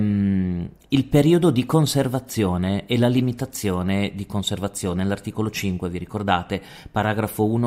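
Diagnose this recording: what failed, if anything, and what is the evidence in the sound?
No fault found in this recording.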